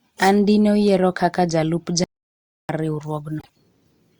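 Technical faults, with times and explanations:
2.04 to 2.69 s, audio dropout to silence: the speech cuts out and returns after 0.65 s of dead digital silence with no room tone underneath, so whatever was said there is gone, most likely because the input link failed while silence kept being written.
3.39 to 3.49 s, frames out of order: a brief garbled flutter, because two neighbouring 26.1 ms blocks play in swapped order, which fits single codec frames decoded out of sequence; no time is lost, only rearranged.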